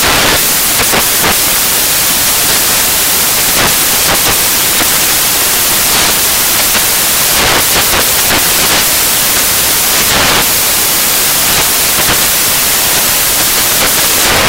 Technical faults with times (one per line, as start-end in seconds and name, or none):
0.00-14.49 samples built from the wrong bytes